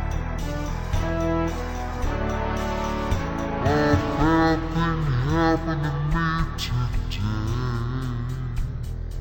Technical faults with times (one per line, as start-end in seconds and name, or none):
0.00-9.20 stereo read as mono